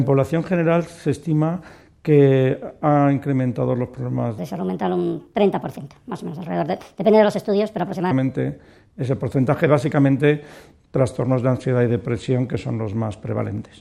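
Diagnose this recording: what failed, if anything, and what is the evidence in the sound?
A section at the wrong speed, most likely from an editing or playback stage running that stretch against the wrong clock, so the samples were read out faster than they were captured. From 4.38 s to 8.11 s the sound runs at 1.42 times its proper rate, and because speed and pitch are locked together, everything in that span rises by about seven semitones and sounds hurried and thin. At 8.11 s it abruptly returns to normal speed and pitch.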